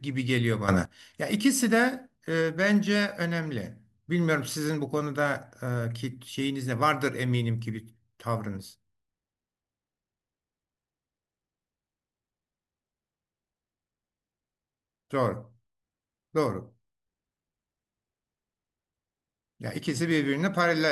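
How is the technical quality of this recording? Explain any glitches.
The recording has one clear glitch, close to the start of the speech.

A sudden gain jump occurs between 0.68 and 0.85 s. The level steps up by about 12 dB from one sample to the next, likely from a gain change applied without any ramp. Speech and background noise both become abruptly louder together for that short stretch, then drop back.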